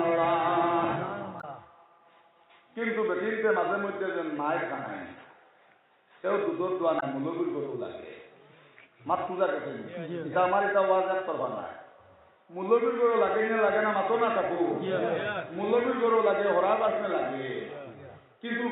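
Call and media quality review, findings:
Brief glitch, about 70 ms each, at 1.37–1.44 s and 6.96–7.03 s. Damaged data in a compressed stream: corrupt bytes garble frame decoding until the decoder resyncs on the next frame header.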